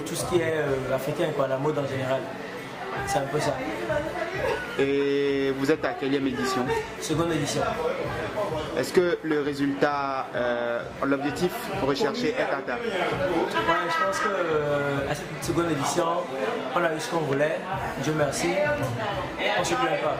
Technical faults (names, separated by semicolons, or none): none